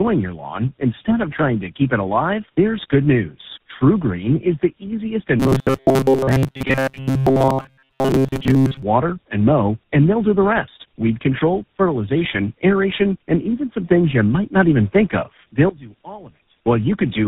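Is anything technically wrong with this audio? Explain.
Yes, two faults. Throughout, the speech sounds rough, muffled and warbly. This is tandem speech coding: three speech codecs in a row, each re-encoding the previous one's damaged output.

From 5.40 to 8.83 s, after "is the easiest and" and before "and mow and they'll", the speech becomes a rigid metallic buzz at 133 Hz. This is robotic sound from repeated short buffers, likely from roughly 7.5 ms chunks repeated in place of most of the real audio.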